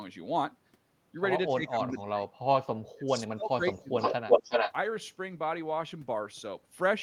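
From 1.48 to 2.23 s, 2.95 to 3.63 s and 3.82 to 3.97 s the voice sinks and breaks up, falling by as much as about 35 dB. This is speech suppressed in double talk, likely an echo canceller turning the talker down while the other side spoke at the same time.

From 3.99 to 4.73 s a second copy of the voice arrives 363 ms late, about 5 dB louder than the speech itself. This echo leak likely comes from a loudspeaker's sound getting past the other end's echo canceller and being sent back.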